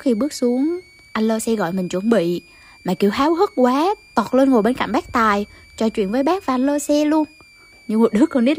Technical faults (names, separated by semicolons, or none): switching supply whistle